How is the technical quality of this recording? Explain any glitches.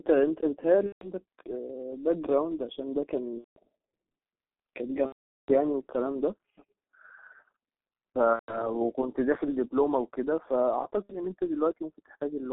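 Technical quality is poor: the speech runs through a heavily damaging low-rate telephony codec for the whole clip, and five dropouts are patched over by concealment.

G.723.1 codec, throughout: this early internet-telephony codec squeezes the speech to about 6.3 kbit/s in 30 ms frames, and the line band runs only from 200 Hz to 3.5 kHz. Because its vocal-tract model is refreshed only once per frame, fast transitions smear. The result is muffled, hoarse speech with blurred consonants and no brightness above the band edge.

VoIP packet loss concealed by the speech codec, at 0.86–1.11 s, 3.38–3.60 s, 5.06–5.51 s, 8.33–8.66 s and 11.03–11.17 s: packets went missing, and the decoder carried on from its last pitch and filter settings while lowering the level frame by frame. Each gap becomes a stretched, buzzy or noisy tone that fades, longest at 5.06 s, where roughly 420 ms of audio was lost, and the speech sounds weak or distorted for a moment after each one.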